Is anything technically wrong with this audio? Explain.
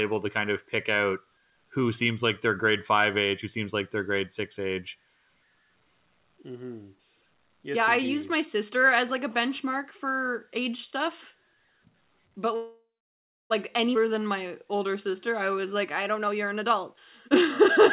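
Yes, there are four timing faults in the last few seconds. The audio is band-limited to about 4 kHz throughout, which fits a narrowband G.711-type call codec.

Call audio freeze, 12.56 to 13.52 s: the sound stalls for about 0.94 s. The last sound is stretched into a decaying fill, then about 0.66 s of silence follows. The likely cause is delayed packets draining the jitter buffer. Playback then resumes where it stopped, with nothing lost.

Skip ahead, 13.94 to 13.97 s: just after "but like", playback jumps forward with only a tiny 10 ms fill. Roughly half a second of audio is gone, dropped while later packets were already queued, so the two sides butt together almost directly.

Jitter buffer slow-down, 14.02 to 16.04 s: the receiver repeats individual pitch periods to rebuild its reserve, adding 162 ms. The audio runs at 92% speed with unchanged pitch, so sounds are drawn out.

Jitter buffer speed-up, 16.15 to 17.63 s: with too much audio queued, the receiver trims short pitch-period segments, removing roughly 0.3 s. 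The audio plays at 118% speed at the same pitch and sounds noticeably hurried.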